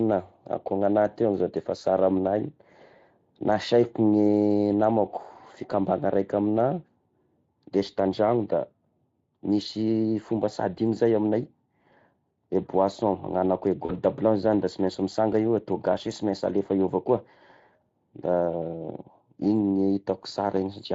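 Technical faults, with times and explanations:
Throughout: Speex codec. The speech carries plainly audible coding damage, a grainy, hoarse texture, which fits Speex at around 20.6 kbps. Speex is a CELP codec that models the vocal tract with a short-term filter and spends its bits on the excitation driving that filter. At this rate the excitation is only approximated, so the fine detail of the voice is replaced by a noisier, rougher signal.
13.85 to 13.92 s: VoIP packet loss concealed by the speech codec. Between "agnanako i" and "blanche zagny da", about 40 ms of audio went missing, which matches two lost frames. The decoder filled the gap by repeating its last pitch period and spectral filter at falling gain, so the speech smears into a short, fading sound. Because each decoded frame depends on the one before it, the sound after the gap stays weak or distorted until the decoder settles.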